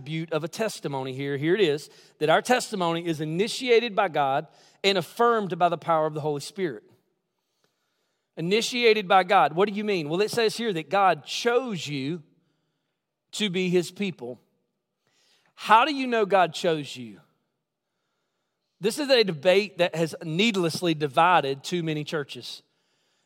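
No technical faults can be heard anywhere in the speech recording, and the signal holds steady throughout.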